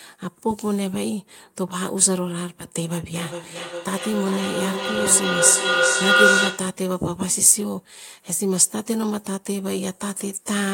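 Feedback howl from 3.07 to 6.89 s: a microphone-to-loudspeaker loop gains on each pass, swelling into a tone near 1.5 kHz that pulses roughly every 0.4 s.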